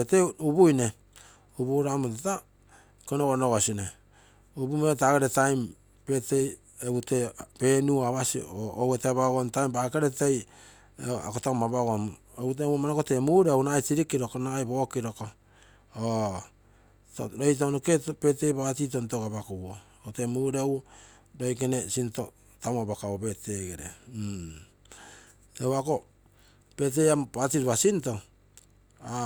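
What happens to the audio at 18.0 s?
Nothing goes wrong at 18.0 s; the speech runs on intact through that moment, with no dropout, click, distortion or other fault to be heard.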